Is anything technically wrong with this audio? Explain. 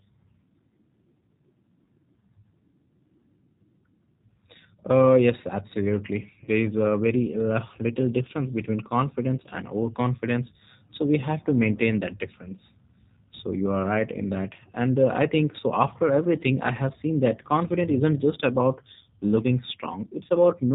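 Yes. Throughout, the G.729 codec shows plainly audible damage: it rebuilds speech from a filter, pitch predictor and sparse pulses, with nothing above 4 kHz, which fits 8 kbit/s. The speech sounds rough and synthetic, and a spectrogram shows an empty band above 4 kHz.

From 6.44 to 6.49 s, VoIP packet loss concealed by the speech codec: about 30 ms of audio, consistent with one lost packet, was extrapolated from earlier frames. It sounds like a brief fading buzz or coloured noise, and the waveform shows a smooth, decaying repeated cycle.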